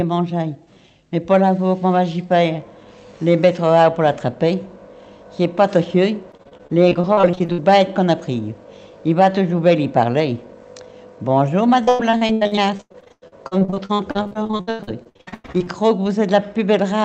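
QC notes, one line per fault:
6.31–7.60 s and 11.84–15.68 s, repeated packet loss (robotic sound): audio keeps dropping out in quick succession, each hole patched by stretching the last sound. About 28% then 43% is concealed, gaps up to 98 ms, giving choppy sound with pieces missing.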